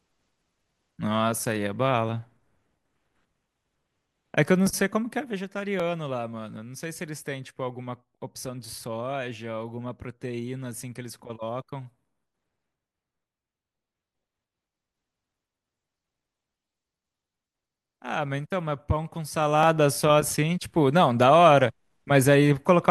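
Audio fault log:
4.67, 5.80, 7.18 and 19.63 s, dropped samples: each is a single sharp click in the speech, heard as a thin vertical line across the spectrum. The likely cause is about 0.7 ms of missing audio making the waveform jump. Unlike zipper noise, it is one isolated tick with no level change.
19.17–19.76 s, zipper noise: the level moves by about 10 dB in coarse unsmoothed steps, roughly a hundred per second, so a fast ticking buzz rides on the speech for that stretch.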